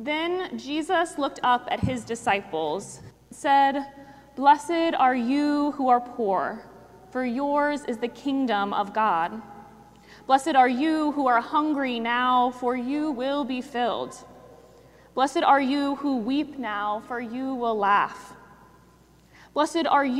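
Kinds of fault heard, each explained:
No technical fault can be heard anywhere in this audio. Nothing in it calls for a fault category or an explanation.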